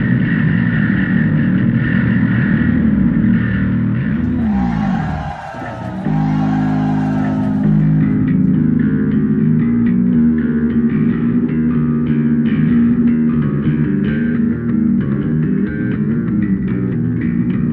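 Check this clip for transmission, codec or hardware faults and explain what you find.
One fault runs through the whole clip: a doubled audio track. The likely cause is the signal being picked up a second time over a slower path, or an edit leaving two copies out of alignment. A second, full-band copy trails the original by about one and a half seconds at roughly the same level, so every event is heard twice. The repeat is dry, with no decay or room colour, and it sounds like a separate overlapping track rather than an echo.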